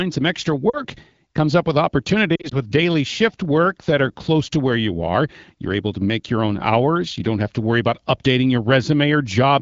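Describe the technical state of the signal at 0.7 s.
At 0.7 s the audio has lost AMR speech frames, from 0.70 to 0.82 s, between "some extra" and "comes up with". About 40 ms of data is gone, which fits two 20 ms frames that failed their checksum. The decoder fills the gap by repeating the last good pitch and vocal tract settings with falling gain. The sound drops to near silence quickly, as is typical for wideband. The return is briefly weak or rough against the clear HD Voice coding around it.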